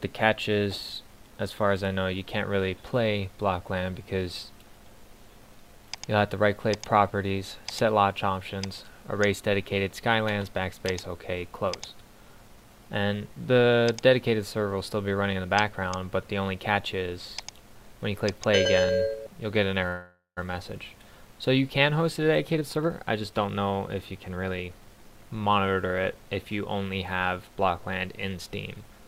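From 19.87 to 20.39 s, packets were likely held up in transit and the jitter buffer ran empty. A call audio freeze results: the last sound is stretched into a fading buzz or hiss, ending in about 130 ms of silence. Playback then resumes where it stopped, with nothing lost but about 0.49 s of added delay.

From 21.93 to 25.59 s, the backed-up jitter buffer is trimmed by cutting short pitch-period pieces again and again, about half a second in total. This jitter buffer speed-up plays the audio at 113% speed with unchanged pitch, so it sounds hurried.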